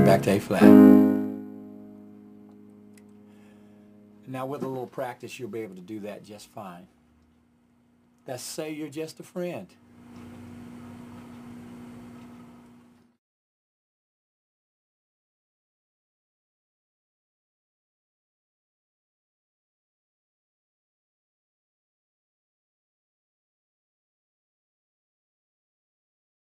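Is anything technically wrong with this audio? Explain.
Yes. From 0.92 s to 1.45 s there is zipper noise. The level falls by roughly 20 dB, but instead of gliding it drops in 1 dB steps at around 40 steps per second, with no smoothing between them. Each abrupt step puts a small discontinuity into the waveform, so a fine ticking, zipping texture rides on the sound for that half-second while the level moves.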